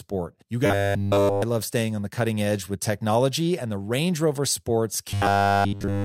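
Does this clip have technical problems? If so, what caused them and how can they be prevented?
Yes. From 0.66 to 1.43 s, just before "love staying on the", and from 5.11 s to the end, the speech becomes a rigid 100 Hz robotic buzz. This is likely repeated short buffers: a 10 ms chunk is replayed almost continuously. Larger playback buffers or a steadier audio feed would prevent it.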